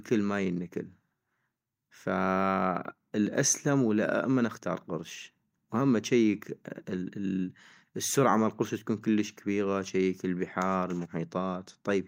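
No technical faults can be heard anywhere in the recording.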